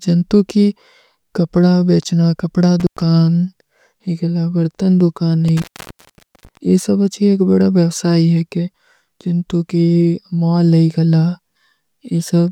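At 2.80 s the speech drops out with an intermittent contact. A loose plug or cable briefly opens the line, so the signal vanishes for about 99 ms with crackle at each edge. At 5.48 s it opens again, for about 830 ms. That gap is far longer.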